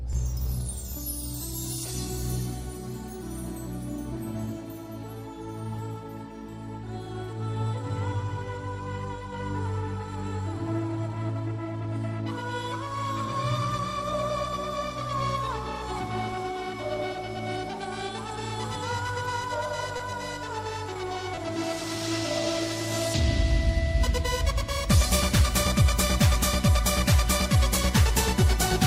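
A late packet left the receiver's jitter buffer empty at 19.97–20.01 s, causing a short stall. The receiver held the last sound for about 20 ms until the packet arrived, so a sound hangs slightly too long, with a faint buzz or dip, though nothing is lost. Playback runs 20 ms later from then on. Twice afterwards, at 20.93–20.97 s and 21.35–21.39 s, packets never reached the decoder. This short concealed packet loss replaced 20 ms of real audio each time with a continuation of the preceding sound, heard as a brief smear or wobble.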